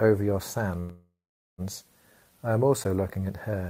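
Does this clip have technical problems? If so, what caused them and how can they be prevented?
Yes. A call audio freeze runs from 0.79 to 1.61 s. The likely cause is packets held up in transit until the jitter buffer ran dry. The receiver stretched the last sound into a fading tail that settles into about 400 ms of silence, then resumes where it stopped, so about 787 ms of delay is inserted and nothing is lost. A larger adaptive jitter buffer and a steadier network path would prevent it.

Blocks of digital silence occur at 0.90 s, lasting about 5 ms, and at 2.84 s, lasting 10 ms. In each, the sound cuts abruptly to silence and returns with no fade, so the brief hole is heard as a tick. This points to output buffers not being filled in time. Giving the audio thread higher priority and more buffer headroom would prevent these dropouts.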